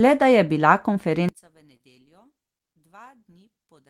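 Just after "da je bila", at 1.29 s, the speech suddenly drops by about 31 dB and stays faint to the end, leaving only a faint residue of the voice. The likely cause is one channel inverted: with one stereo channel's polarity reversed, the centred voice and low frequencies, which are nearly identical in both channels, cancel when the channels are summed to mono. Only the small difference between the two channels survives.

From 1.77 to 1.81 s there is a brief smear within that faint audio, a short wobble lasting about 45 ms. This is short concealed packet loss. Roughly 20 ms of the call arrived too late for the decoder, so the receiver extended the preceding sound for about 25 ms to cover the gap and then blended back into the real signal, leaving a blurred patch in the speech.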